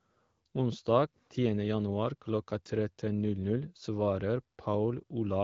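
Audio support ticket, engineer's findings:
Engineer's findings: no fault found in this speech audio; the AMR wideband (HD Voice) codec path at 12.65 kbit/s is operating normally.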